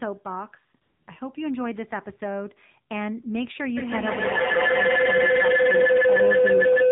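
The whole clip of speech has passed through the AMR narrowband mobile codec (AMR-NB). Nothing above 4 kHz survives, so the sound is muffled and band-limited. At this coding depth, which fits a low mode around 7.4 kbps, the vocal-tract model and sparse pulse excitation leave the voice plainly buzzy and synthetic, with the codec damage audible in every phrase.

From 0.82 to 1.08 s, about 260 ms, AMR comfort noise takes over. The sender classed the signal as silence and stopped transmitting speech frames, so the receiver generated a steady, smooth noise from a rough description of background level and spectrum. It replaces the real background for that stretch and switches in and out abruptly at both edges, rather than blending with the surrounding sound.

At 3.77 s a feedback howl starts and runs to the end of the clip. A second device in the same room is picking up the loudspeaker output and sending it back, with the loop adding gain on each pass. 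The repeats grow rather than decay and narrow toward a tone around 500 Hz, pulsing roughly every 150 ms at the loop delay. At its peak it sits about 10 dB above the speech and never breaks off.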